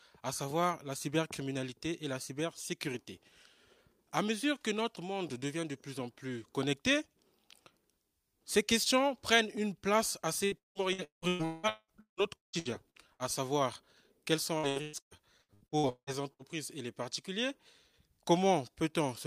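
From 10.45 to 13.22 s, repeated packet loss makes the sound choppy and robotic. Holes up to about 190 ms are filled by extending the last sound, covering roughly half the stretch. It returns from 14.58 to 16.42 s, with gaps up to about 180 ms.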